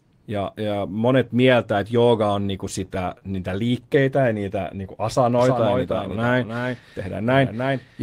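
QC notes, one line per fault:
2.85–4.03 s, scattered short gaps: right after "että jooga on niinku", about seven brief holes, the longest around 30 ms, are patched by extending the last sound. This leaves small ticks and smears.
5.39 s to end, doubled audio track: a full-band copy about 5 dB quieter enters abruptly, roughly 300 ms behind, with no decay. The likely cause is a second, slower capture path.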